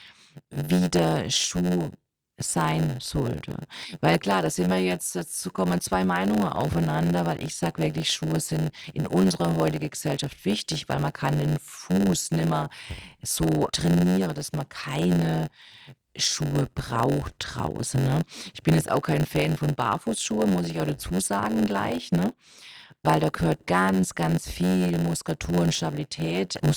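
From start to finish, the speech carries a block size mismatch with padding. One stage hands over blocks that are shorter than the next stage expects. The leftover part of each block is filled with silence. These tiny gaps repeat about 92 times a second, so a steady buzz near 91.9 Hz sits under the speech. The gaps also stretch the timing. Everything plays at 0.919 times normal speed, yet the timbre stays about where it should be.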